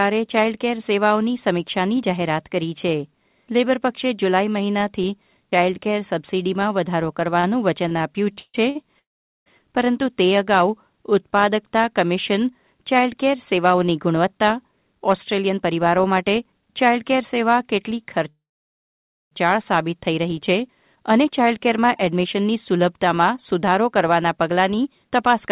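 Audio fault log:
7.40–8.77 s, repeated stalls (stutter): the speech halts six times in quick succession, each gap briefly filled by a continuation of the last sound, the longest 146 ms and about 318 ms in total. Nothing is skipped, so it drags rather than jumps. Unlike a freeze, these are many short hitches, not one long hole.
8.99–9.48 s and 18.29–19.33 s, call audio freeze: the sound holds as a fading buzz and then falls silent, for about 0.43 s of the 0.49 s gap and about 0.92 s of the 1.04 s gap, before resuming exactly where it stopped. The likely cause is a single long packet delay that emptied the jitter buffer.
13.57–17.23 s and 20.75–25.48 s, jitter buffer speed-up: the speech runs at about 109% and 108% of normal pace, with roughly 0.3 s and 0.4 s trimmed away in tiny pitch-period slices. The pitch stays unchanged, which separates this from simple fast playback. It sounds hurried rather than chipmunk-like.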